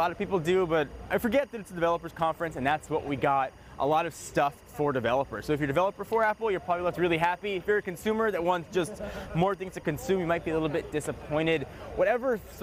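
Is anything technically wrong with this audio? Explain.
Yes. Timecode bleed runs through the whole clip. Linear timecode at 23.976 frames per second is leaking in from a neighbouring track or cable. Its square wave flips between tones near 1 and 2 kHz, producing a steady chirping warble about 35 dB beneath the sound.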